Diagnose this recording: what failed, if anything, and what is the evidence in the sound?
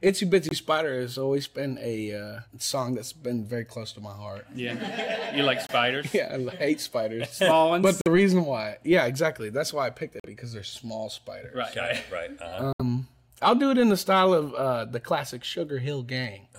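Likely a Bluetooth dropout in wireless playback: late packets were discarded, leaving 23 to 70 ms silent holes at 0.49, 5.67, 8.01, 10.20 and 12.73 s.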